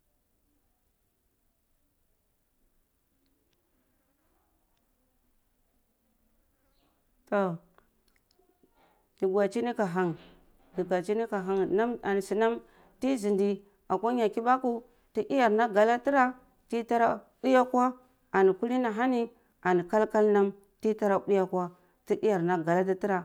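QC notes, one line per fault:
No faults heard across the speech on this pass.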